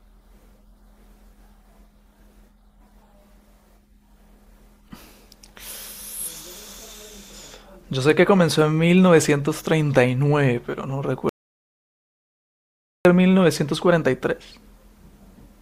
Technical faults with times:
11.29-13.05 audio dropout to silence

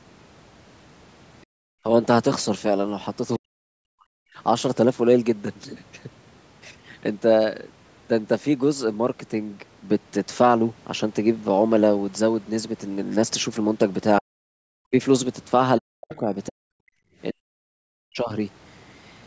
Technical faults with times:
1.46-1.83 background gated by the echo canceller
3.38-4.11 speech suppressed in double talk
14.20-14.26 speech suppressed in double talk
14.77-14.94 speech suppressed in double talk
15.78-16.91 speech suppressed in double talk
16.13-16.17 other side's voice leaking through
17.33-18.32 speech suppressed in double talk

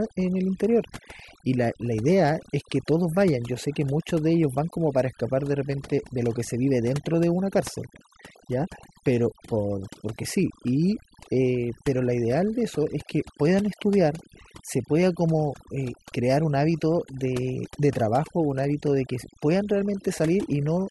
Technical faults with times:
0.00-20.91 overdone noise removal

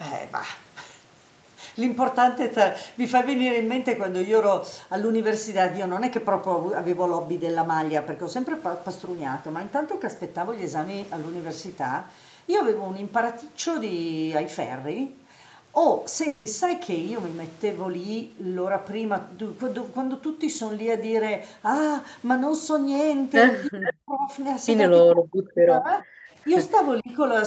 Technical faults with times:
16.27-16.47 long network dropout
23.68-24.32 speech suppressed in double talk
23.85-23.93 echo leak
25.11-26.16 speech suppressed in double talk
26.44-26.49 speech suppressed in double talk
27.00-27.18 speech suppressed in double talk

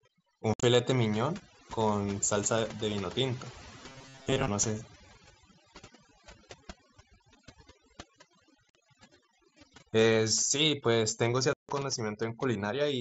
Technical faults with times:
0.00-13.01 overdone noise removal
0.54-0.63 unconcealed Bluetooth headset packet loss
3.88-4.48 robotic sound from repeated short buffers
8.70-8.75 unconcealed Bluetooth headset packet loss
11.53-11.69 unconcealed Bluetooth headset packet loss

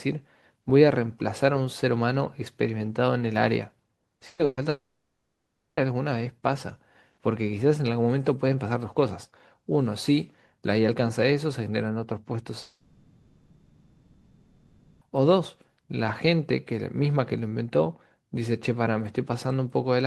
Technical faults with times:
4.15-4.60 burst of packet loss
4.69-5.80 long network dropout
12.61-15.04 long network dropout

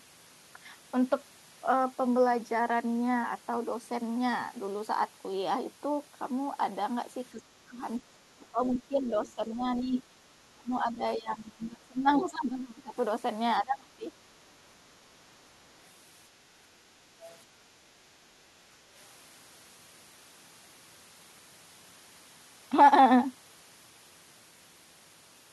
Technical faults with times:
7.32-7.81 speech suppressed in double talk
8.14-9.98 speech suppressed in double talk
9.26-9.32 other side's voice leaking through
9.74-10.03 other side's voice leaking through
10.52-12.94 speech suppressed in double talk
13.61-14.12 speech suppressed in double talk
17.31-17.36 other side's voice leaking through

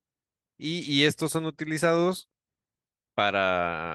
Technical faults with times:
none

